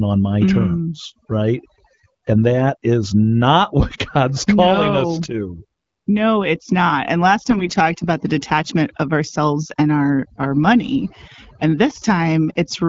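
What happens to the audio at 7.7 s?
At 7.7 s you're right at the tail of a burst of AMR bit errors, running from about 7.50 to 7.74 s. Corrupted bits in the weaker-protected parts of the frames throw off the pulse positions and fine gain and spectrum values, so the voice turns briefly hoarse and gargly while keeping its pitch and level. Underneath that there's overdone noise removal through the whole clip, with bands near the noise floor gated away, leaving twinkly specks in the quiet gaps.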